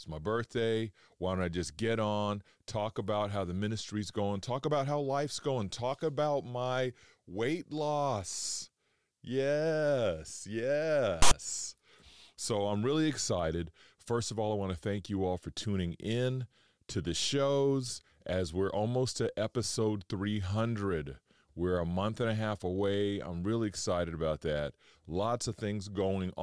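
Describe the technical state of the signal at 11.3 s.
At 11.3 s the speech is broken by file tags played as audio, from 11.22 to 11.31 s. A block of text tags is being decoded as sample values. It sounds like a loud, lopsided rasp of static. It starts and stops with hard edges.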